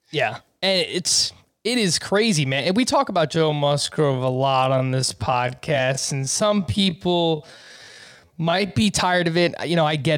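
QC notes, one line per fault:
3.30–8.86 s, time-stretched section: after "we talk about", software likely stretched this span to fill a longer slot, slowing it to about 0.57 times normal pace while holding pitch by repeating short slices of the waveform. The pitch stays put but the pace drops abruptly, giving a drag that lasts until the normal pace snaps back at "tired of it".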